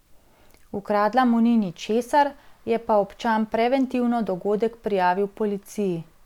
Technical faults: none

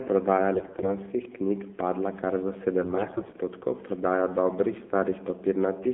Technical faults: AMR narrowband mobile codec; AMR bit errors

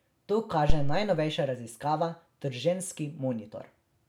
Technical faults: phantom power thump

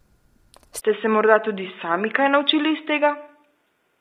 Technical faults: low-delay AAC compression; input switched to a poorer device

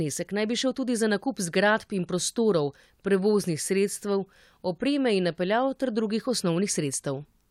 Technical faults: none

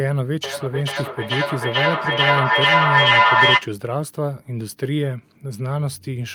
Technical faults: feedback echo between two devices

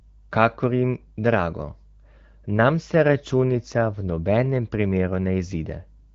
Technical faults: none

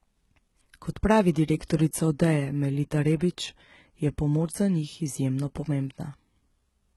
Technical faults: HE-AAC compression

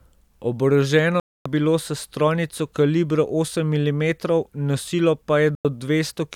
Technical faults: digital broadcast dropout

